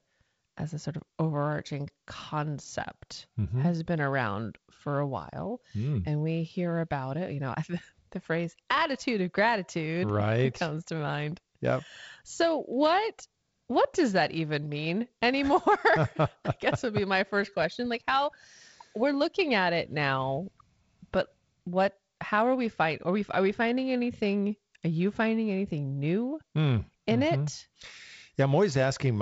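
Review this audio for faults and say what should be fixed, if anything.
Nothing needs fixing: the speech is carried in a wideband telephone channel with content ending near 7.7 kHz and a light coding texture in both bands, which fits G.722 coding at about 48 kbit/s.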